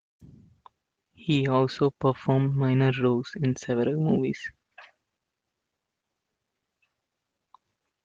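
No technical faults can be heard anywhere in this speech recording. The Opus voice compression keeps the full band and leaves only a faint coded texture, which fits a hybrid stream at around 24 kbps.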